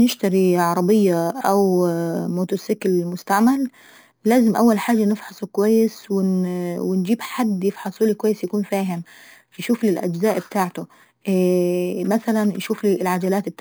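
Throughout, imaging from sample-and-hold upsampling: the rate was raised by repeating samples with no smoothing filter, which fits 11 kHz audio brought to 44.1 kHz. Mirrored spectra between 5.5 and 11 kHz, about 22 dB down, add a metallic fizz tracking the speech.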